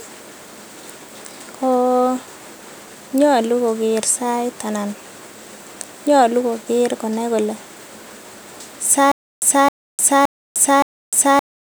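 From 9.12 s onward, stutter with silent gaps: a 265 ms fragment repeats every 569 ms amid digital silence, likely a stalled stream.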